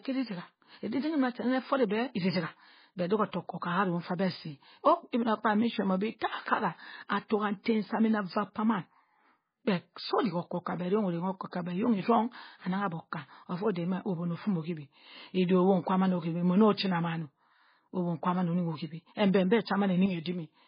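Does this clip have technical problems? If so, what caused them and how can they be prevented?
Yes. Throughout, the speech sounds heavily watery and swirly, with nothing above 5 kHz and smeared attacks. This is likely MP3 compression at a bitrate near 16 kbps, where the encoder discards weak frequency lines frame by frame and cuts the treble. Encoding at a higher bitrate or with a modern codec prevents it.

From 20.06 s to the end, the level suddenly falls by about 6 dB with no other change in tone. This is likely one channel dropping out, so that only half of an identical stereo pair reaches the mono mix. Checking cables, connectors and the channel routing prevents it.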